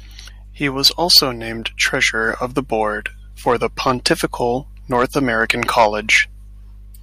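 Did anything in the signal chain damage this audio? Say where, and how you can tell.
Yes. In the analogue wiring, a ground loop or nearby transformer is coupling the power line into the signal, producing mains hum: a steady 50 Hz tone with low harmonics, roughly 20 dB below the speech, present from start to finish.

Gain ahead of the converter was set too high, so peaks hit the converter's limit and were cut flat, causing hard clipping. Distortion from the flattened peaks is heard at 0.65–1.19 s (about 11 dB overdrive), 3.48–4.25 s (about 6 dB) and 4.95–6.20 s (about 8 dB).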